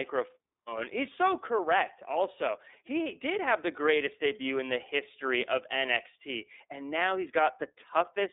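Throughout, the speech has passed through the iLBC codec, coding each frame's excitation independently, which fits 30 ms frames at 13.33 kbps. Nothing reaches above 3.8 kHz, leaving a telephone band of roughly 300 Hz to 3.7 kHz, and the voice sounds plainly rough and synthetic.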